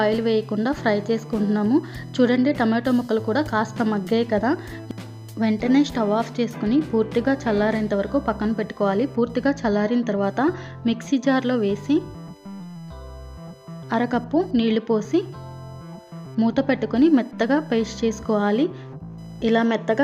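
Computer activity noise runs throughout: a faint buzzing chirp pulsing near 1 kHz, roughly 35 dB below the sound, from the computer's load changes disturbing the shared audio ground.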